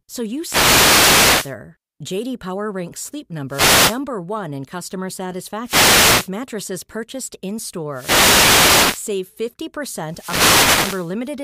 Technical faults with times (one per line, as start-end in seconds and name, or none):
0.39-1.56 wireless microphone noise hit
3.49-4.00 wireless microphone noise hit
5.63-6.30 wireless microphone noise hit
7.91-9.09 wireless microphone noise hit
10.07-11.15 wireless microphone noise hit